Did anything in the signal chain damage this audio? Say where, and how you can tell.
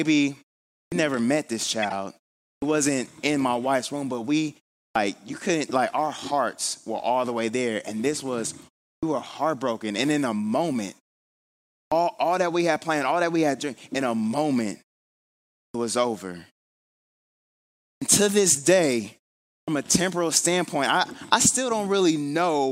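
Yes, two things. At playback, the output device is nodding off in the gaps, giving clipped starts after a pause at 0.84, 2.55, 4.88, 8.95, 11.84, 15.66, 17.94 and 19.6 s. Each restart swallows roughly 72 to 84 ms, so speech jumps in already underway.

At the codec, there's a corrupt frame decoded twice. The decoder played damaged frames instead of concealing them, producing misplaced spectral energy. You get a short glitch across about three frames at 1.82 to 1.93 s, and a quieter single-frame glitch at 8.40 s.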